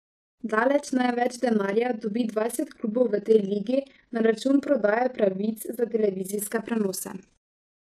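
Throughout the speech, the audio was split into windowed frames and rejoined with an overlap whose windows fail to add up to a steady gain, causing overlap-add ripple. Level swings by about 11 dB around 20 times a second, giving a rough flutter.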